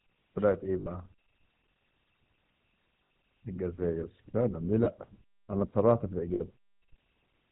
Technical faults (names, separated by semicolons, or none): GSM full-rate codec; lost GSM frames